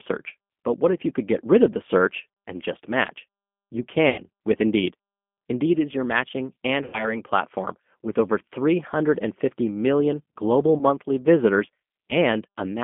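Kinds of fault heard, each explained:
G.729 codec: an 8 kbit/s model-based speech codec band-limiting the line to about 200 Hz to 3.5 kHz, leaving the speech plainly rough, thin and synthetic throughout.
VoIP packet loss concealment by the speech codec: four losses of 30 or 90 ms, such as after "rid of the search", where the decoder stretches the sound into a fading buzzy tone or coloured noise.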